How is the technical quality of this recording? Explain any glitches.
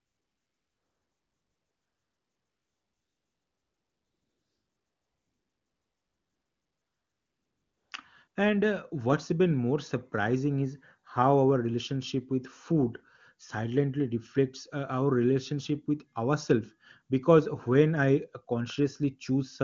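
The recording has one recurring fault: AMR comfort noise, heard twice. From 0 to 7.91 s, and again briefly from 8.27 to 8.35 s, the phone treated the input as silence and stopped sending speech frames. The receiving end filled those gaps with synthetic noise built from a rough estimate of background level and spectrum. The real background disappears and is replaced by a smooth, steady hiss that switches on and off. The wideband codec itself shows little or no damage, which fits AMR-WB's highest rate.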